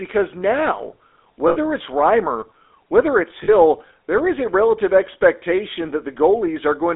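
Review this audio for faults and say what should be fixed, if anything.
The GSM full-rate codec is audible throughout, giving a buzzy, gravelly roughness and a band limited to about 300 Hz to 3.6 kHz, which fits the 13 kbit/s full-rate coder. This coder is distinct from plain band-limiting because of the pulse-driven grit. Send the audio over a wideband codec to prevent it.

There are lost GSM frames from 1.48 to 1.57 s, and again from 3.44 to 3.55 s between "whether it's" and "there is a relative". Each gap is filled with a held, metallic ring rather than a silent dropout or a click. Use jitter buffering and error protection to prevent it.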